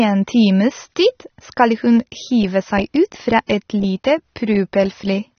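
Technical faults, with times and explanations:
Throughout, AAC compression: nothing above 6.3 kHz, so the speech is dull and smeared. Likely cause: AAC-LC starved of bits, consistent with about 24 kbps.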